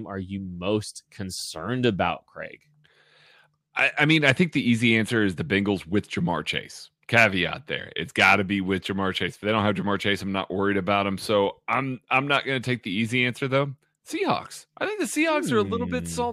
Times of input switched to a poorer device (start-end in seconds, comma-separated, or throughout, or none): none